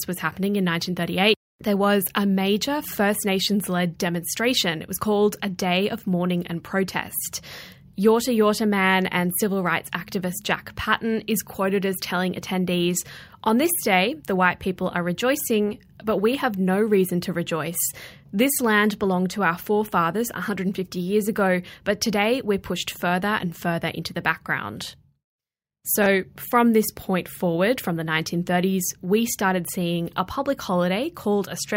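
A speech clip with one spot of chunks out of order at 26.02 to 26.06 s, just before "from this point forward": a 20 ms chunk turns up one chunk late and plays after its neighbour, giving a quick jumbled blip.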